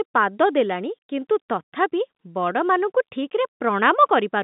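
Nothing stood out on listening; the speech carries the narrow sound of ordinary G.711 telephone coding, with nothing heard above about 3.8 kHz.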